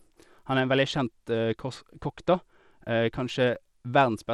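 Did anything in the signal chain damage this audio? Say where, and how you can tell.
Yes. Bluetooth SBC compression runs throughout, likely from the codec stage. Coarse sub-band quantisation starves the top bands, leaving flickering treble and gritty aliasing on the speech, consistent with a low bitrate around 96 kbps.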